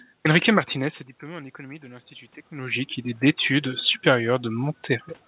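From 0.75 to 2.97 s there is automatic gain rising. After the talker moves away around 0.5 s and the input drops by about 18 dB, the gain control slowly adds about 4 dB, so the speech and room noise swell together.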